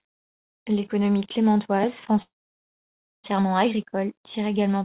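A speech clip in which, from 2.22 to 3.26 s, the sound stretches briefly and then drops to near silence for most of that second, resuming with "agricole tire également" with nothing lost, a call audio freeze, likely from delayed packets draining the jitter buffer. The audio is cut off above 4 kHz, which fits a G.711 mu-law call codec.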